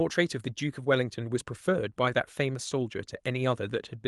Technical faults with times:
none

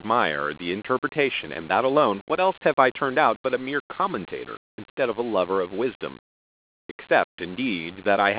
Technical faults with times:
none

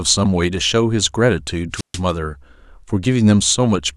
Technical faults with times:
1.73-2.00 wireless microphone squelch dropout

